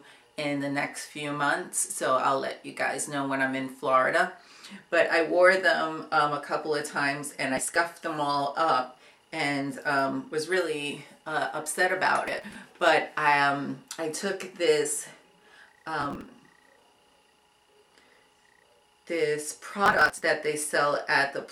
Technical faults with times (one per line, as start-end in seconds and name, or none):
7.57-7.75 processor overload crackle
12.28-12.55 processor overload crackle
16.01-16.26 processor overload crackle
19.86-20.23 processor overload crackle